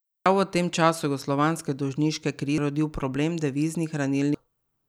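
Damaged data in a compressed stream at 0.26 s (before "v tem času jugoslovanske"), 2.58 s (between "tem času jugoslovanske dolžniške" and "je rodil") and 4.34 s: corrupted frames make the decoder lose sync, producing brief glitches.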